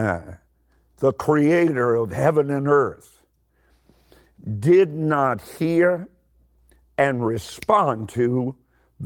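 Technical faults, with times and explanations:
No technical faults are audible in this speech.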